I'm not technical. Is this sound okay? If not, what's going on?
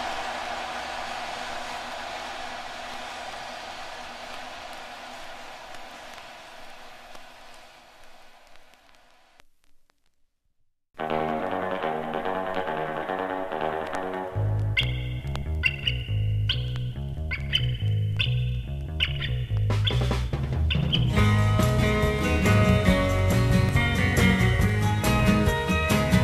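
No. From about 21.2 to 25.7 s there's a steady ticking, one tick every half second, roughly ten in all. These are periodic USB or driver dropouts: something keeps briefly stalling the audio connection, and each time about a millisecond of sound drops out to silence.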